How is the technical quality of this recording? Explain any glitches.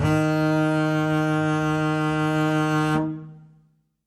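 The music carries plainly audible codec damage from start to finish. WMA compression is the likely cause, running throughout. A transform codec like WMA works in long blocks, so its quantisation noise smears over tens of milliseconds around each event, and at a low rate, which here points to roughly 48 kbps, quieter spectral lines are discarded. The result is a ringing, washy texture with hiss that swells and fades with the music, and nothing at all above 15.1 kHz.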